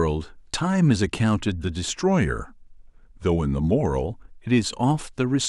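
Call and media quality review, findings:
Speech slows about 5.75% and drops about a semitone (−103 cents), 1.94–4.05 s, then snaps back. Drift correction step, likely from a clock-sync resampler changing rate to rebalance its buffer.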